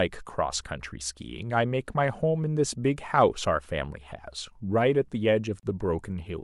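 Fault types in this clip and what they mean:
Gap at a join of encoded pieces: the speech was encoded in 6 s chunks and joined without trimming, so encoder start-up delay and end-frame padding stay in. Around 5.6 s there's a 34 ms hole with edges smeared by the codec, then the sound resumes where it stopped.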